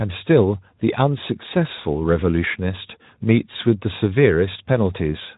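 No technical faults can be heard in this speech recording.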